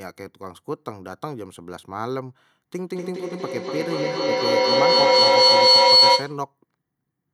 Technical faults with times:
2.75-6.47 feedback howl

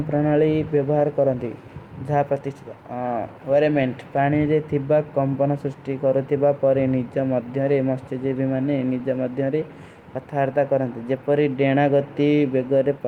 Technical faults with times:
none

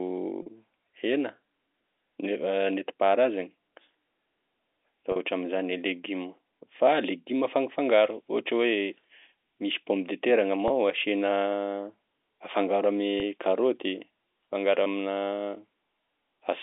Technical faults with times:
0.42-0.46 packet loss with pitch repetition
5.12-5.16 packet loss with pitch repetition
10.68-10.70 packet loss with pitch repetition
13.20-13.22 packet loss with pitch repetition
14.84-14.86 packet loss with pitch repetition

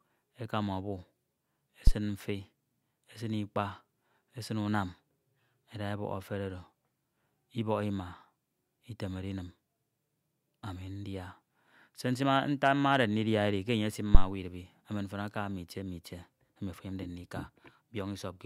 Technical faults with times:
1.87-1.93 phantom power thump
14.15-14.27 phantom power thump

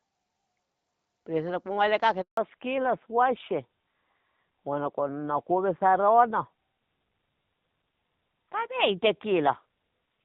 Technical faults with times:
2.21-2.37 handover gap
2.37-10.25 fallback to narrowband

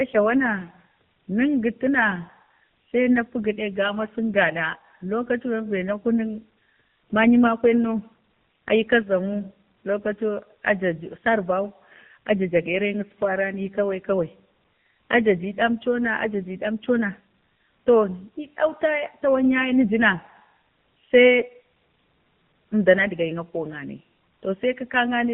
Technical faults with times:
0.00-25.34 AMR narrowband mobile codec

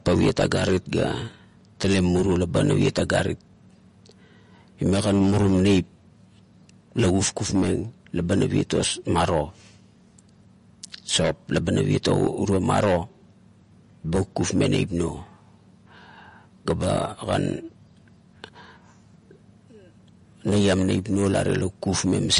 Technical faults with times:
0.00-22.40 MP3 compression

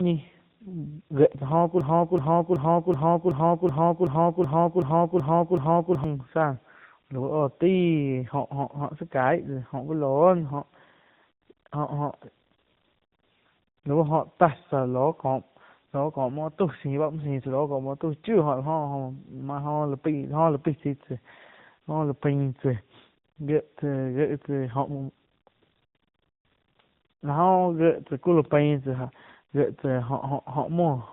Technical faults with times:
0.00-31.12 tandem speech coding
1.81-6.04 broken-record loop

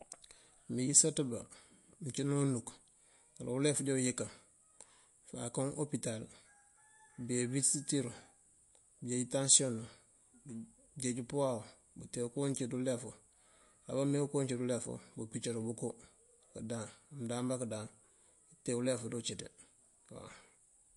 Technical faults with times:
0.00-20.96 MP3 compression

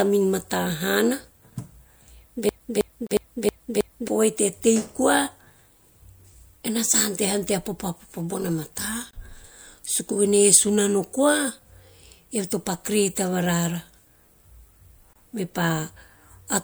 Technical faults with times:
2.49-4.08 broken-record loop
3.07-3.11 gap at a join of encoded pieces
9.11-9.13 gap at a join of encoded pieces
15.13-15.16 gap at a join of encoded pieces

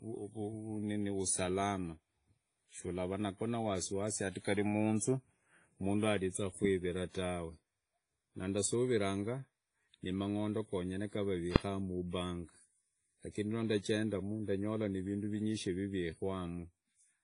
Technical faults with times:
0.00-17.24 WMA compression
11.56 invalid numbers at full scale

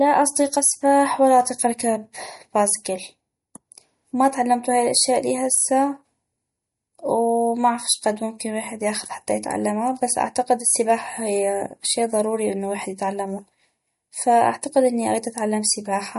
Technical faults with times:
0.00-16.18 MP3 compression

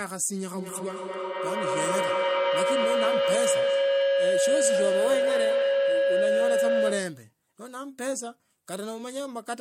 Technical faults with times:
0.54-7.32 feedback howl

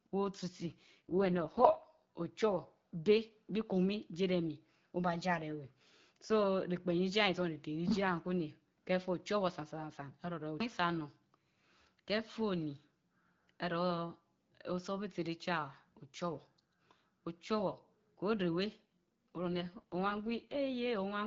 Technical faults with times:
0.61-2.03 AMR rate drop
19.28-20.56 AMR rate drop

